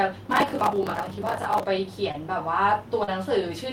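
From 0.31 s to 1.64 s the speech is covered by processor overload crackle. The processor repeatedly misses its deadline for buffers of around 10 ms, and each miss replays a scrap of old audio with hard edges. Dozens of these misses in a row produce a gritty, tearing crackle that rides on the speech for over a second and stops once the load clears. The crackle is long and rough, unlike the brief, smooth gaps that come later.

Short concealed packet loss occurs twice: at 2.11 to 2.16 s about 20 ms of audio never arrived, and at 3.04 to 3.09 s about 40 ms. Each time the receiver fills the gap by extending the preceding sound and then blends back into the real signal, so the result is a single soft smear or wobble rather than hard-edged grit.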